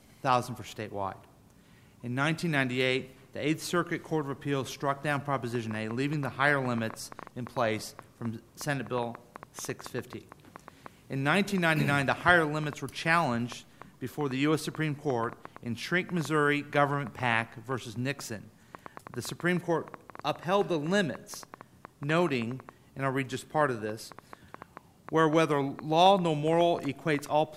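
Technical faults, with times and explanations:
5.55–27.27 s: train of clicks. Some 150 sharp pulses of near-identical shape arrive at an uneven pace averaging about 6 per second, peaking around 5 dB above the programme, so they tick audibly over the sound and through the gaps. Likely cause is external interference or a faulty connection.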